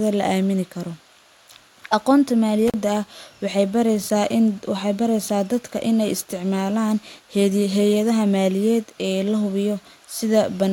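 At 2.68 s the speech drops out briefly, with the disturbance ending by 2.74 s. This is an intermittent contact: a loose plug or cable connection momentarily separates, breaking the signal path for about 38 ms before the contact closes again. The gap is framed by crackle as the connection breaks and remakes, and while the line is open the sound gives way to faint hiss rather than true silence.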